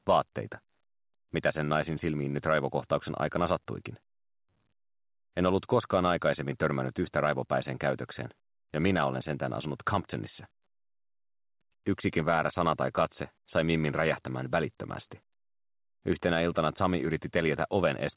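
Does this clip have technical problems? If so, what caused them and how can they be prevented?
No, nothing in this clip points to a technical fault. It carries the sound of a call path working normally, with nothing above 4 kHz, which fits a narrowband telephone codec such as G.711 A-law at 64 kbps.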